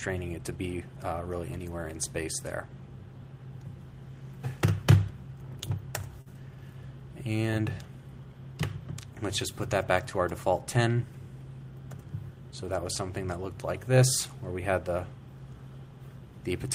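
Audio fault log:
6.21 to 6.28 s, short stall from a late packet: a packet turned up late, the jitter buffer ran dry, and the receiver held the last stretch of sound for about 45 ms until the data arrived, then picked up exactly where it had paused. Nothing is lost, but the held portion hangs unnaturally with a faint buzzy or dipped quality, and everything after it plays 45 ms later than before.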